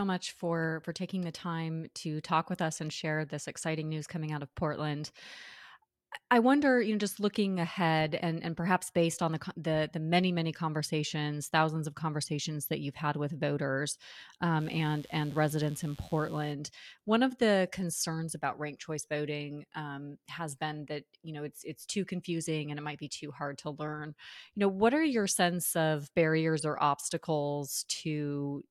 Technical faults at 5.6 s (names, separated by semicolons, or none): none